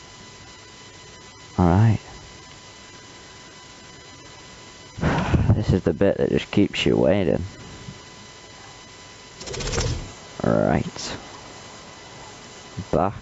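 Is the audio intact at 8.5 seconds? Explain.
No. Gain pumping runs through the whole clip, including 8.5 seconds: the level swings by around 10 dB as a fast limiter pulls the gain down on each loud sound, most likely because the input gain is set far too high. Everything sounds squashed.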